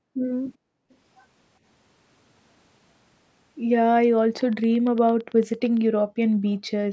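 Right at the start, 0.00 to 0.23 s, and again from 0.57 to 0.90 s, the room sound gets pushed down hard, about 40 dB at its deepest, and then comes back. That's background gated by the echo canceller: the far end's loudspeaker was playing, so the canceller clamped the microphone until it let go. The background just ducks out and returns, which makes the gaps feel oddly dead.

Straight after that second dip, at 0.90 to 0.95 s, there's a very faint, brief copy of the speech trailing about 387 ms behind the original. It sounds like an echo leak, where the far side's canceller likely didn't fully scrub what its microphone picked up from its own loudspeaker and sent that scrap back. It's only a short, quiet ghost, but it's there.

From 4.41 to 5.78 s you get a steady ticking, roughly fifteen clicks at 8.82 per second, evenly spaced and about as loud as the speech itself. That's a train of clicks: repeated, near-identical pulses sitting on top of everything, including any pauses.

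At 6.06 to 6.19 s the background gets gated again, down about 40 dB for a moment before it recovers.

Near the end, at 6.51 to 6.55 s, another short echo fragment turns up, faint again but a bit more noticeable than the first one, lagging about 410 ms behind.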